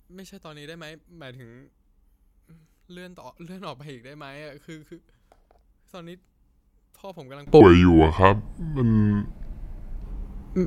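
Speech, heard here as a mono fold-down, falls about 25 dB from 0 to 7.47 s and sounds faint. The likely cause is one channel inverted: with one side's polarity reversed, the material shared by both channels cancels on summing, leaving only their small difference. On a waveform this stretch is a much smaller envelope than what follows. A spectrogram shows faint energy there. From 7.61 to 10.02 s the speech drops to a lower pitch and a slower pace, running at 0.745 times normal speed, about five semitones down. This is a section at the wrong speed, likely from playback against a mismatched clock, which moves speed and pitch together. On a spectrogram the harmonic stack and formant bands sit lower and closer together, and each syllable is stretched in time. The waveform shows longer, drawn-out shapes over those seconds.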